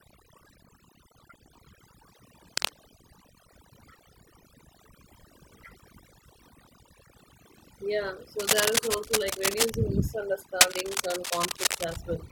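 A speech recording with heavy-handed processing all the way through: it has overdone noise removal. The noise reducer was pushed hard enough that it's switching individual frequency bands off whenever they sit near its noise estimate, so the background has collapsed into near silence with little twinkling specks, and the quieter parts of the speech get carved away too. On top of that there are three bursts of cable scratch noise, at 2.48 to 2.69 s, 8.39 to 9.74 s and 10.61 to 11.96 s. They're dense, uneven scratchy rustles sitting right on top of the speech, the first two roughly as loud as the speech itself and the last one a bit louder. That's likely a worn cable, connector or control being moved, with its contact resistance jumping around rapidly while it shifts.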